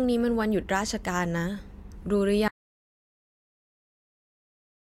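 The input feed was likely lost at 2.48 s, through a disconnected device, failed link or accidental mute, while recording carried on writing silence. This audio dropout to silence cuts the speech off mid-flow, leaving dead silence with no room tone through to the end.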